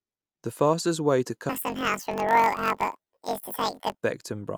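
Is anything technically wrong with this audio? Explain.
Yes. From 1.49 to 4.0 s, after "fastest way to", planar audio is read as interleaved. Each 21.8 ms block plays twice at double speed, an octave up, buzzing at 45.9 Hz.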